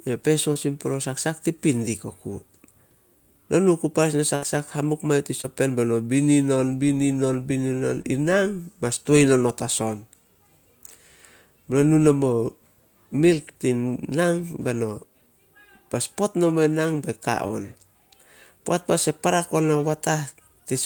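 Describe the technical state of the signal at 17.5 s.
Short concealed packet loss at 17.47–17.51 s, just after "in nang be ka": about 20 ms never arrived, and the decoder bridged it by extending the preceding sound, leaving a brief smear.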